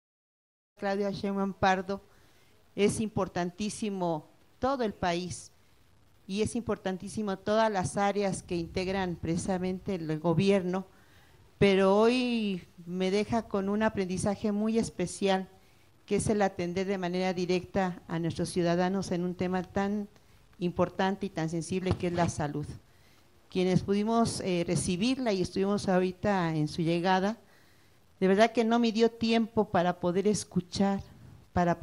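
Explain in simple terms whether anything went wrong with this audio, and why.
Nothing went wrong: apart from a deliberate, smooth fade-in during the first second or so, the audio shows no faults.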